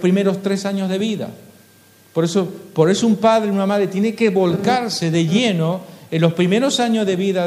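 Nothing stood out on listening; no technical fault could be heard anywhere in the audio.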